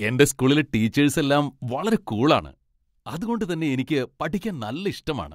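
At 2.39 s, just after "ടീച്ചേസ് എല്ലാം വളരെ കൂൾ", the speech abruptly falls by about 6 dB and stays quieter to the end. This is likely one channel dropping out: with one stereo side lost, the mono sum carries only half the shared signal.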